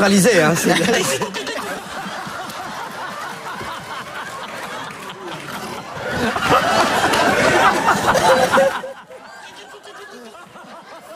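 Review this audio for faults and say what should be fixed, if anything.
Zipper noise appears from 8.62 to 8.96 s. The level drops by roughly 25 dB in that span. It falls in hard 3 dB steps, about twenty per second, with nothing easing one step into the next. Each jump leaves a small click, and together they make a rapid ticking over the sound. To prevent it, ramp the gain per sample or smooth it across each step.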